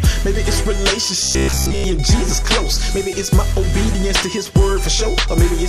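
From 1.23 to 1.84 s, robotic sound from repeated short buffers: a 66.7 Hz buzz, likely from 15 ms loops, striping the spectrogram vertically.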